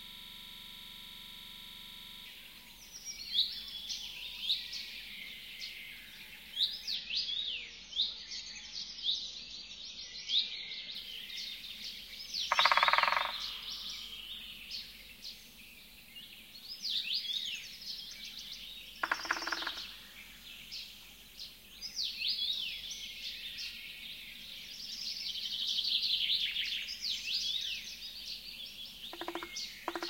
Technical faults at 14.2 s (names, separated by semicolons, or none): none